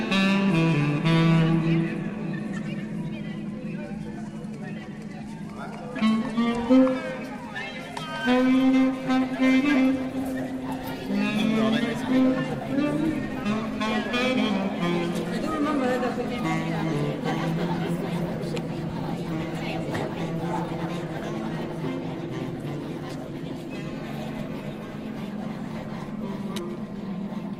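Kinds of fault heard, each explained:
No technical faults can be heard anywhere in the audio: the signal stays continuous and stable throughout, with no dropouts, distortion or level disturbances.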